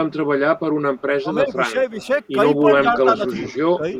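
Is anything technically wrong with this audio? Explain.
Yes. Between 0.96 and 4.0 s there's an echo leak, a faint delayed copy of the speech trailing it by 343 ms. It comes in at 0.96–1.02, 1.99–2.27, 2.93–3.58 and 3.95 s. It's likely the far end's echo canceller letting loudspeaker pickup through. It starts very quiet and rises to about 20 dB under the speech.

There's also speech suppressed in double talk at 1.21–2.0, 2.75–3.35 and 3.77–3.84 s. The speech dips, by up to roughly 10 dB, likely because the canceller turned down talker and echo together.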